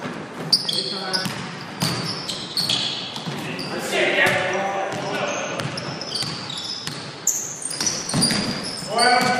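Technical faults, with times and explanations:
0.02 to 1.79 s, train of clicks: about ten sharp, similar ticks at an uneven pace, roughly 6.25 per second, peaking about 5 dB above the sound and audible in pauses too. The likely cause is repeated pulses from interference or a faulty connection or power supply.
7.81 to 8.87 s, processor overload crackle: a gritty tearing crackle rides on the sound, then stops. Many audio deadlines were missed in a row, and each skipped buffer left a tiny hard-edged gap. This points to very short buffers under a millisecond, with around 150 missed.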